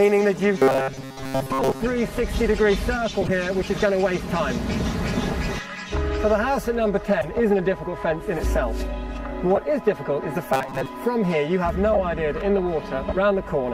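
Right at the start, 0.36 to 0.42 s, there's a short blip from a corrupt frame decoded: a few damaged compressed frames got played anyway, so energy lands at the wrong frequencies, peaking at about -30 dBFS. It recurs at 3.21 to 3.30 s (a louder burst around -10 dBFS), 5.67 to 5.72 s, 7.21 to 7.28 s, 8.37 to 8.40 s, 9.55 to 9.58 s (the harshest, near -5 dBFS) and 11.93 to 12.00 s, each a chirp or squeak lasting roughly one to a handful of frames.

From 0.58 to 1.80 s the audio goes to robotic sound from repeated short buffers, a rigid metallic buzz at 133 Hz that loosely tracks the underlying sound. The likely cause is playback starving and looping the last chunk, which fits a buffer of about 7.5 ms. Most of that stretch is repeats, and the real audio underneath is skipped. The same buzz returns more briefly from 10.53 to 10.87 s, where roughly half is repeated.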